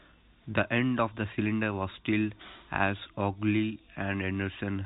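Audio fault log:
Nothing stood out on listening to this speech, which comes across with the narrow, telephone-like band of G.711 coding.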